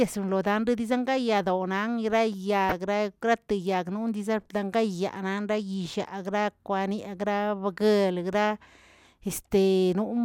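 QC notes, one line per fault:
2.69–2.73 s, DAB burbling: a brief burble over the speech. Bit errors slipped past error correction, putting short noise blips into single sub-bands across three frames.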